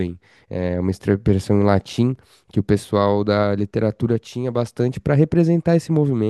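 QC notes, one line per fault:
1.85 to 2.16 s, processor overload crackle: for about a third of a second the speech gets a gritty, tearing crackle. Around ten short buffers, a few milliseconds each, missed their deadline and dropped to silence, and those hard-edged gaps stack into a rough burst that clears once the load eases.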